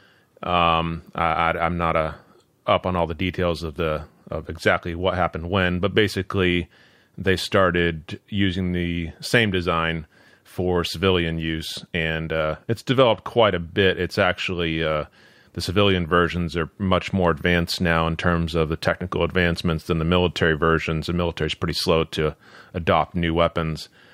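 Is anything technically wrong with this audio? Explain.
No, nothing is technically wrong.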